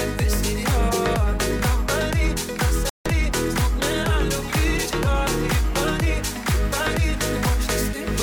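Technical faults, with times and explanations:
2.90 to 3.06 s, digital broadcast dropout: the sound mutes for 160 ms, then resumes later. The receiver discarded bad frames, which fits five lost frames.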